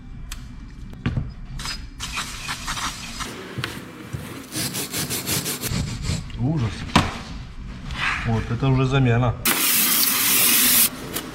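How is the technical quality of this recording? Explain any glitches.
The recording holds up until the last couple of seconds, where sample clock jitter creeps in from about 9.08 s and runs to the end at 11.34 s. The converter's timing wobbles by something under a microsecond, so each sample lands a touch early or late. On steep, fast-moving parts of the waveform that timing slip turns into a real amplitude error, sitting roughly 25 dB below the signal. You hear it as a grainy hiss riding on the louder, brighter moments, dropping away whenever the sound goes quiet.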